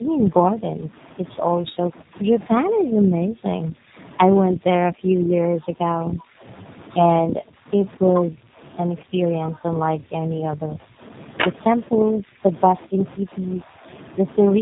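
Throughout, the speech sounds rough, muffled and warbly, with nothing above 3.8 kHz: tandem speech coding, where iLBC-coded speech was decoded and coded again in G.729A. From 1.61 to 2.15 s, 2.47 to 3.98 s and 7.23 to 8.64 s the voice dips by up to roughly 30 to 40 dB or breaks up. This is speech suppressed in double talk, likely an echo canceller turning the talker down while the far side spoke.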